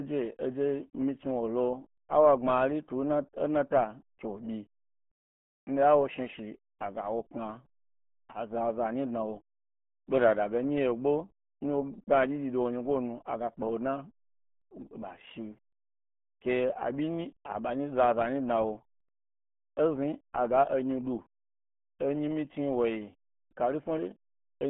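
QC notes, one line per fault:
Throughout, RealAudio 14.4 codec: the speech sits in a narrow band of roughly 150 Hz to 3.4 kHz, and nothing above 3.8 kHz survives. The coder squeezes the signal to 8 kbit/s, leaving the speech muffled and gargly with a smeared, bubbling texture. A plain telephone band-limit would sound thin but clean. What sets this apart is the heavy coding damage layered over the lost highs, which points to a low-rate dial-up codec rather than simple filtering.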